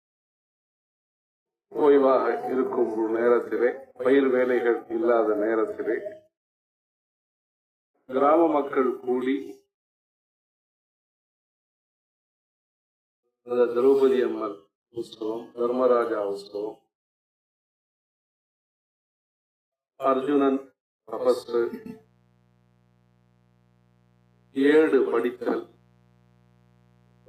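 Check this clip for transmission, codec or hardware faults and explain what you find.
One hardware fault is present: mains buzz from 21.29 s to the end of the clip. Sharp switching spikes on a 60 Hz supply, such as from a dimmer, rectifier or poorly shielded line, leak in twice per cycle. They add a dense comb of harmonics reaching several kilohertz, heard as a steady, raspy buzz sitting roughly 40 dB below the audio. Unlike plain hum, which is a smooth low tone near the fundamental, this has a gritty, edged character from those upper harmonics.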